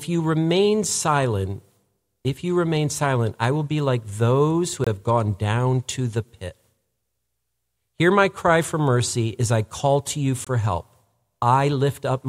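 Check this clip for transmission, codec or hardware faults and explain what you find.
Two brief dropouts are present, both consistent with a Bluetooth stall. The first runs from 4.84 to 4.87 s, between "be like those who" and "have gone down to"; the second from 10.45 to 10.47 s, just after "I call to you". Each is a hard cut to silence of 22 to 24 ms before the speech resumes. The likely cause is interference delaying packets so the headphone buffer emptied and playback paused until retransmissions arrived.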